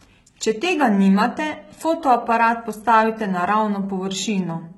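From start to end, the speech carries heavy damage that is likely HE-AAC compression, consistent with a very low bitrate around 16 kbps. The upper band is rebuilt by copying lower frequencies upward, so sibilants sound gritty and metallic, with treble that doesn't match the body underneath.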